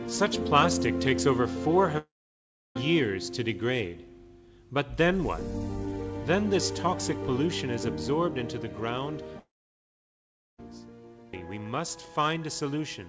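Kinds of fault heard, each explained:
Long network dropout: the sound cuts out near 1.98 s and 9.39 s, a brief fading fill then silence, likely from audio packets never arriving.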